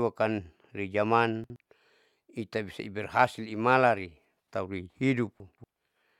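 Chunks out of order: at 1.44 to 1.56 s a 60 ms chunk plays one chunk late, and at 5.4 to 5.64 s, after "bisa berhasil imalan tauri", another plays three chunks late, each giving a jumbled stutter in the speech.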